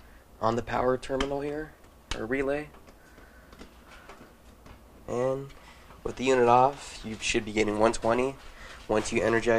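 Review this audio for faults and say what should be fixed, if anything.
No faults turned up in this audio, so nothing needs to be fixed.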